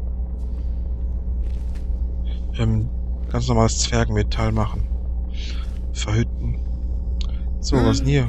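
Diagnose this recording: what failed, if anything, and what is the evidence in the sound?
A steady low tone at 60 Hz sits under the sound for the whole clip, roughly as loud as the material itself. This is mains hum, an analogue wiring fault: a ground loop or a nearby transformer is coupling the power line directly into the signal path.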